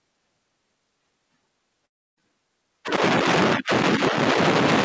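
From 1.86 s to 2.23 s the speech breaks off and a gap of roughly a third of a second follows. The last sound is stretched into a fading buzz or hiss before giving way to about 300 ms of silence, and the speech resumes with the missing portion, around 320 ms, simply gone. This is likely a long network dropout, with the receiver concealing the loss before going quiet. Throughout, nothing is heard above 8 kHz, which fits a G.722 call codec.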